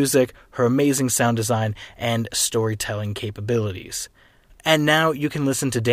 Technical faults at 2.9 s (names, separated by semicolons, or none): none